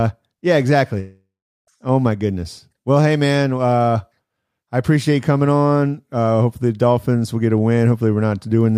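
At 0.99 s the speech breaks off and does not resume until 1.69 s, a gap of about 0.7 s heard as a long network dropout. The likely cause is a stall in packet delivery: roughly 680 ms of audio never arrives. The receiver stretches the last fragment into a buzzy or hissy tail that decays, leaving about 380 ms of near-silence before the signal returns with the lost portion simply skipped.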